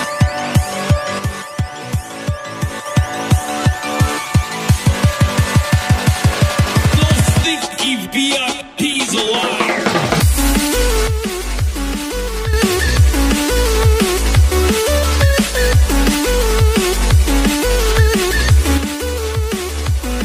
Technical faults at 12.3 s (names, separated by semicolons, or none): one channel drops out